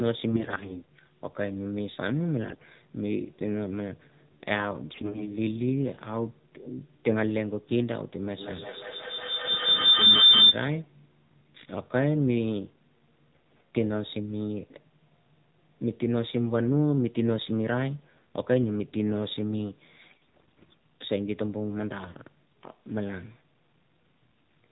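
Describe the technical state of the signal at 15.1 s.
At 15.1 s the speech carries AMR narrowband mobile codec damage, present across the whole clip. Nothing above 4 kHz survives, and a few-pulse vocal-tract model leaves plainly audible buzzy, synthetic artefacts, which fits a low rate near 7.4 kbps. A simple low-pass filter would only dull the sound, not add that texture.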